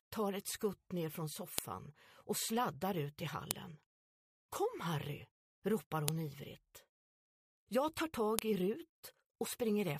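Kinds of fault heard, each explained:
File header played as audio: four sharp, loud snaps land at about 1.58, 3.51, 6.08 and 8.39 s, each over in a blink. That's what you get when separate WAV chunks are glued together or streamed back to back with their headers left in, so a few dozen bytes of file metadata get played as if they were samples. Each click marks the start of a new piece and cuts straight across whatever the sound is doing.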